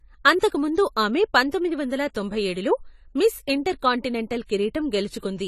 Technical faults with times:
0.00-5.47 AAC compression

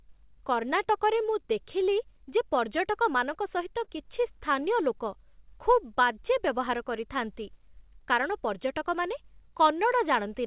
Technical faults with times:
3.84-3.90 short concealed packet loss

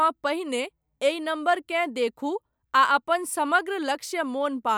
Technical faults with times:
none

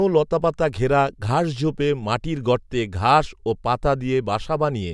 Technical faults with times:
none

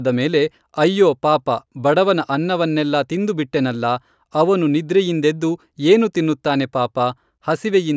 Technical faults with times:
none

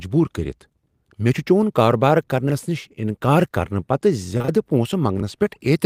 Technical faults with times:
2.47-2.52 chunks out of order
4.37-4.50 short concealed packet loss
5.18-5.23 chunks out of order

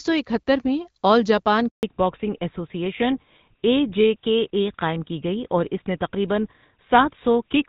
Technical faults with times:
1.69-1.83 handover gap
1.83-7.69 fallback to narrowband

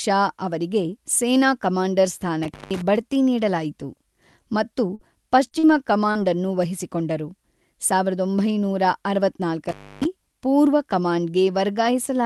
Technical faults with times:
2.43-2.82 intermittent contact
4.95-5.02 short concealed packet loss
5.47-5.66 short concealed packet loss
6.11-6.18 short concealed packet loss
9.69-10.05 intermittent contact

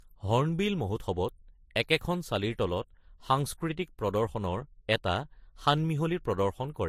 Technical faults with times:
0.00-6.88 transcoding between lossy codecs

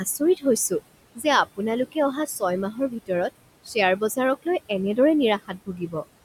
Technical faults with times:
0.00-6.24 noise suppressor artifacts
1.15-1.25 speech cut by the noise suppressor
2.72-3.10 speech cut by the noise suppressor
5.48-6.04 speech cut by the noise suppressor

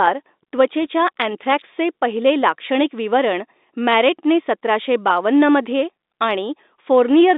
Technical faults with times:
none

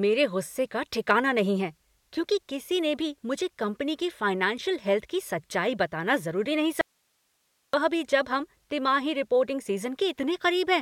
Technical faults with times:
6.81-7.73 audio dropout to a faint residue

